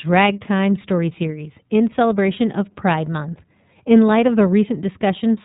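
The whole speech clip has passed through the iLBC codec, a narrowband VoIP coder that encodes each 30 ms frame's excitation on its own, without drawing on the previous frame. The coding quality fits its 13.33 kbps mode. Nothing above 3.8 kHz survives, so the speech sounds band-limited and telephone-like. The codec damage is plainly audible throughout: the speech remains clear but takes on a rough, synthetic texture.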